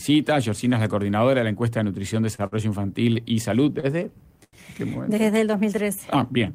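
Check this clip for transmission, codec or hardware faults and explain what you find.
Four short stalls from a late packet are audible, at 2.35–2.42 s, 2.47–2.55 s, 3.80–3.86 s and 4.44–4.56 s. Each time a packet missed its playout deadline, the jitter buffer emptied and the receiver stretched the last sound to cover the gap: about 32, 53, 32 and 86 ms. Playback then resumed from the same point, so nothing is lost. The sound briefly holds and slightly buzzes or dips.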